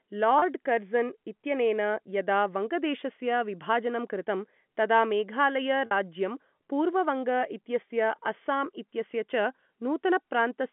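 Speech over a narrowband G.711 telephone line, and there are two short dropouts where packet loss with pitch repetition kicks in: around 0.39 to 0.42 s (about 30 ms lost) and 5.86 to 5.91 s (about 50 ms). The receiver loops the last pitch period to cover each gap, so you get a brief buzzy, held sound before the speech picks up again.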